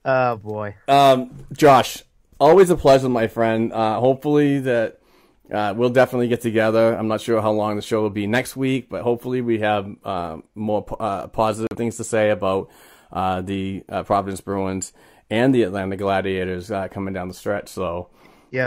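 A digital broadcast dropout in this speech recording cuts the sound from 11.67 to 11.76 s, between "have uh more uh" and "things to say about", as the receiver muted over what points to one corrupted frame.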